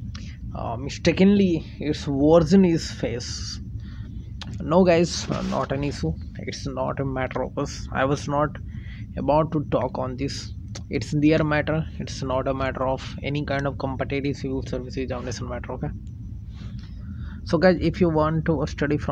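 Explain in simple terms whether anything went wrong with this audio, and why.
Nothing went wrong; no problems can be heard anywhere.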